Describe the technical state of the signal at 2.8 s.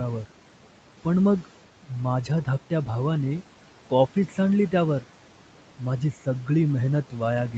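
At 2.8 s, noise suppressor artifacts are present, as throughout the clip. Steady-noise bands are pulled down about 12 dB frame by frame, so the background dips between words and swells under them.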